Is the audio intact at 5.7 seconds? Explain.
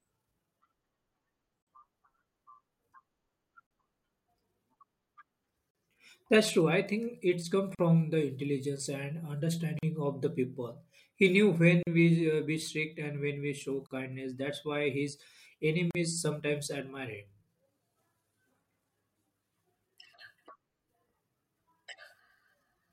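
No. Separately encoded pieces of about 2 s were joined untrimmed, leaving a gap at a join of encoded pieces: a 40 ms gap from 5.71 to 5.75 s, its edges smeared so the silent part is shorter, then speech resumes.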